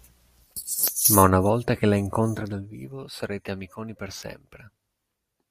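No technical faults are audible.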